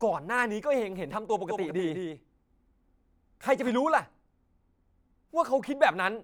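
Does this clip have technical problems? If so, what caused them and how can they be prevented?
Yes: a doubled audio track from 1.49 to 3.69 s, where a second copy of the speech, about 5 dB quieter, trails about 200 ms behind, likely from a slower duplicate capture path or misaligned edit. To prevent it, route each source through only one capture path and check edits for overlapping copies.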